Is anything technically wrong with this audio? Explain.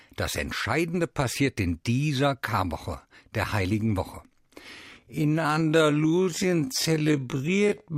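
Yes. From 4.98 s to the end is a time-stretched section. Software likely slowed the speech to half speed by repeating short pieces, so it abruptly drags at unchanged pitch.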